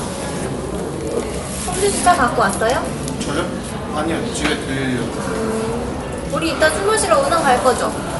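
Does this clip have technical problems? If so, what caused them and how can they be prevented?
Yes. Throughout the clip, the sound is dull and nothing is left above about 11.4 kHz. A rough, fluttering noise clings to tonal parts. This is likely Dolby Digital compression at a low bitrate, which fits something near 64 kbps. Short of bits, the encoder narrowed the band and gave many frequency lines no detail. The decoder filled those gaps with noise. Encoding at a higher bitrate, or keeping an uncompressed source, would prevent it.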